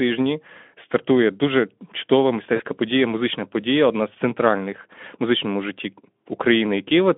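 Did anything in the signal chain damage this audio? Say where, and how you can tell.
Yes, at the network stage: right after "стартує дуже чудова", from 2.55 to 2.62 s, there's VoIP packet loss concealed by the speech codec. The decoder fills the gap by smearing its last pitch and filter into a fading buzzy tone or coloured noise. That points to about two 20 ms frames lost, and the voice stays weak or distorted for a moment after packets return, into "подія музична подія одна". The narrowband Speex coding under it sounds as light as you'd expect.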